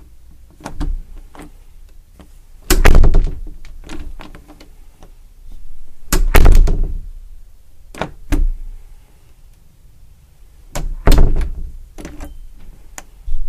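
Everyday sounds with two bursts of hard clipping, 2.71–3.18 s and 6.13–6.61 s, where overload of about 14–15 dB flattens peaks into harsh fuzz.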